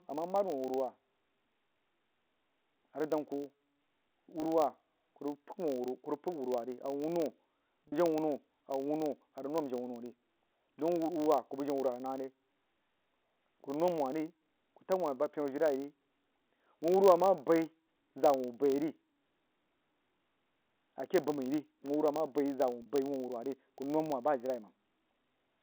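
A filter restarted on every block runs through the whole clip. It loses its state at each block boundary and starts again from silence. Each block therefore opens with a small transient. These ticks come 50 times a second and merge into a steady 50 Hz buzz. The buzz rises and falls with the loudness of the speech. It sits on top of the narrow telephone band, which G.711 coding limits to about 250 Hz to 3.4 kHz.

Packet loss with pitch repetition occurs three times. At 4.40 s, 20 ms of audio is lost. That fits a single 20 ms packet. The receiver fills the gap by repeating the last pitch period, so the sound holds briefly with a buzzy edge. At 7.88 s and again at 22.82 s, 40 ms goes missing. Each gap is about two packets long. The repeated cycle fades further, and the speech returns through a short cross-fade.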